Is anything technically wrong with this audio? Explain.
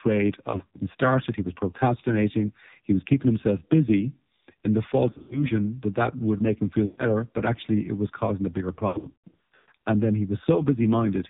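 Yes. AMR narrowband mobile codec damage runs through the whole clip. At roughly 5.9 kbps, the 8 kHz vocal-tract model cuts everything above 4 kHz and has too few pulses to rebuild the voice, so the speech sounds heavily buzzy, muffled and synthetic.

Lost AMR speech frames occur at 0.50–0.79 s, 5.10–5.50 s (after "himself busy in the", before "that that would make"), 6.86–7.05 s (after "would make him feel", before "but actually it was") and 8.88–9.73 s (after "was causing a bigger"). When frames fail, the decoder replays the last good pitch and vocal-tract settings at falling gain. The speech smears, warbles and dips, and the final stretch breaks up worst, with about 560 ms missing across 0.8 s.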